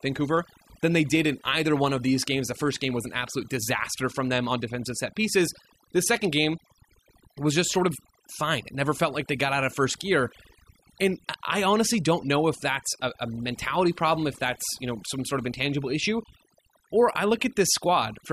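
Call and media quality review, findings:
Overdone noise removal throughout the speech. Background pulled to near silence with twinkling specks; quiet syllable tails dropping out. Denoiser set too strong, gating bands near its noise estimate. Unlike codec starvation, the artefacts track pauses and quiet passages, not bursts.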